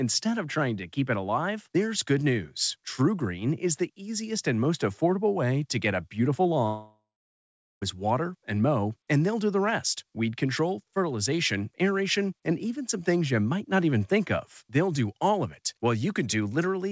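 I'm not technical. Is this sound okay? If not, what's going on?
No. The connection likely stalled in a long network dropout, losing about 1.2 seconds of speech. After "to get a beautiful" (6.66 to 7.84 s), the last sound smears into a fading buzz, then roughly 0.8 s of silence, before "is water and mow" resumes with the gap missing.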